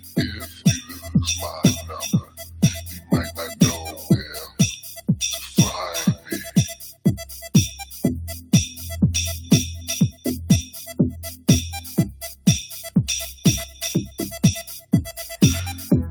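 A noise suppressor built for speech is applied to this sound for the whole clip. It treats steady tones, ambience and decaying tails as noise and pulls them down. Sharp onsets get through. Sustained parts sink. The level swings by roughly 10 dB as the suppressor clamps and releases. The result pumps and flutters, and the sound feels thinner than it should.

The sound is also cut by the noise suppressor in six places: 0.00–0.17 s, 0.44–0.66 s, 0.82–1.09 s, 2.21–2.62 s, 2.81–3.11 s and 12.12–12.46 s. Here the suppressor judged the sound to be noise and turned it down harder than elsewhere. The deepest drops run from about 9 dB to about 13 dB. The worst is at 2.21 s. Each dip lasts a fraction of a second. Held or fading sound sags or its decay is chopped short.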